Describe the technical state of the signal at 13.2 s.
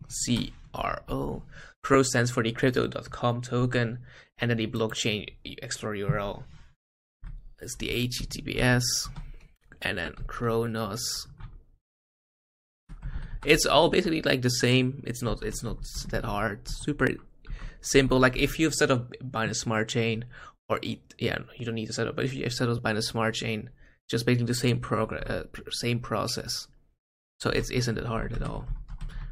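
At 13.16 to 13.19 s there are lost LE Audio frames: a 30 ms gap, consistent with three 10 ms LC3 frames. The decoder fills it by replaying the last good spectrum with randomised signs, so tonal content briefly turns into a noisy smear.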